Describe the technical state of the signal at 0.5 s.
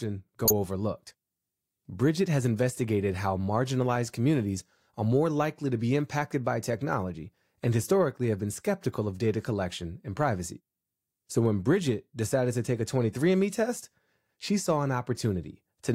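At 0.5 s a corrupt frame was decoded: flipped bits in about two compressed frames went to the decoder, which played them anyway. Misread codes and gains placed energy at wrong frequencies from 0.45 to 0.51 s, heard as a brief chirping burst of noise in the speech.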